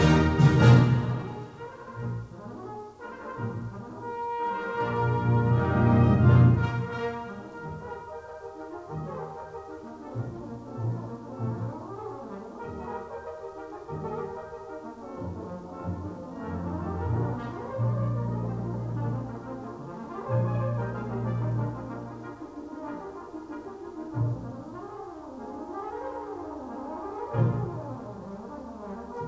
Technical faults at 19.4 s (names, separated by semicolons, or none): none